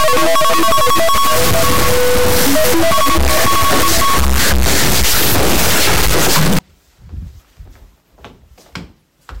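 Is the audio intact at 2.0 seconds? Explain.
No. At 2.0 seconds the audio sits inside a stuck bit fault running from 0 to 6.59 s. It sounds harsh and buzzy. One high data bit is likely held fixed, pushing about half the samples off by a step near -5 dBFS.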